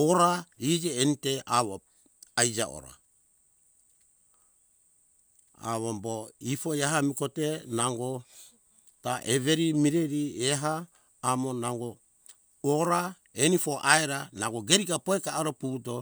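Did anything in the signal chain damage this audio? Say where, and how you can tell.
No, nothing in the chain damaged this speech.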